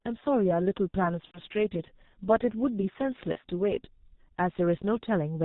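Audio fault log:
throughout: G.723.1 codec, heavy damage; band-limited below 4 kHz with a slowly updated vocal model, so speech sounds muffled and hoarse, fitting a roughly 6 kbit/s rate.
1.25–1.41 s and 3.32–3.38 s: VoIP packet loss concealed by the speech codec; the decoder extrapolated through about 90 ms, then 30 ms, producing a fading buzzy tone or coloured noise and weak onset recovery.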